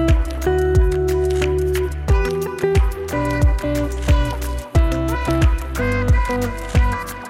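From about 2.72 s right through to the end, there's periodic clock jitter. Something is wobbling the converter's sample clock at a steady rate of around 500 Hz, so every component of the sound picks up sidebands spaced roughly 500 Hz above and below it. The higher-frequency content takes the worst of it, and the result is a rough, metallic edge riding on top of the audio.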